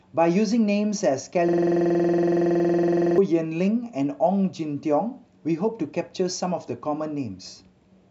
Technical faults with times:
1.49-3.18 system hang loop

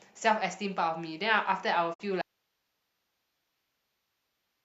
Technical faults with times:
1.93-2.01 digital broadcast dropout
2.21-4.64 audio dropout to a faint residue

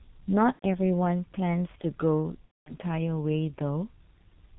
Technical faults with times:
0.00-4.59 G.723.1 codec
0.53-0.65 VoIP packet loss concealed by the speech codec
2.45-2.76 VoIP packet loss concealed by the speech codec

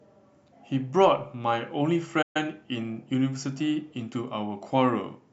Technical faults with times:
2.22-2.37 playback stall

